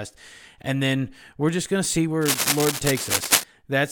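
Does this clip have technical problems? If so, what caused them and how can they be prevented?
Yes. From 2.21 to 3.44 s, just after "just going to see", a cable scratch noise runs over the speech: dense, irregular bursts of scratching, roughly as loud as the speech itself. Its likely cause is a worn cable or connector being moved, so that its contact resistance jumps erratically. Unlike steady hiss, it is lumpy and uneven, and unlike digital clicks, it lasts over a second. Replacing worn leads and securing connectors so they cannot shift prevents it.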